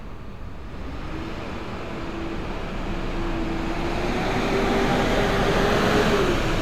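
No technical faults can be heard anywhere in this recording of sounds. Nothing in it points to a problem in capture, transmission or playback.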